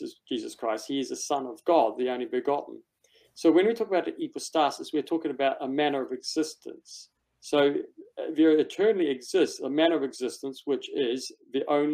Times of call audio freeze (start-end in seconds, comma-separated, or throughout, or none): none